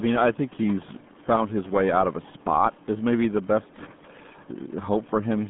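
From start to finish, the speech shows heavy RealAudio 14.4 codec damage. The band is cut to 150 Hz–3.5 kHz with nothing above 3.7 kHz, and coarse low-rate coding, consistent with an 8 kbit/s dial-up stream, makes it muffled and gargly. Room noise sits about 23 dB below the speech.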